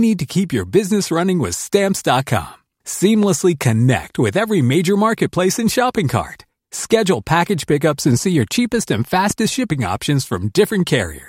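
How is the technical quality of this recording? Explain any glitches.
Two loud pops break into the speech, at 3.23–3.25 s and 9.31–9.33 s. A sudden voltage step or spike, likely from a plug, a switch, a static discharge or a driver glitch, entered the signal path, and the circuits after it shaped it into a brief pulse. Each is heard as a single sharp pop on top of the speech, which carries on underneath. The first stands a few decibels above the speech, and the second is clearly stronger, around 10 dB above it.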